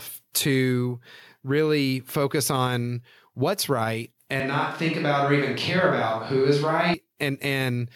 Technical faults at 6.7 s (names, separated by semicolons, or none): switch to a distant microphone